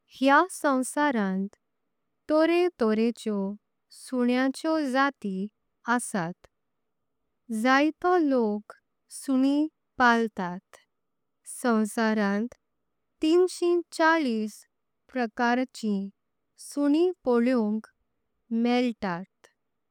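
Nothing stood out on listening to this speech recording.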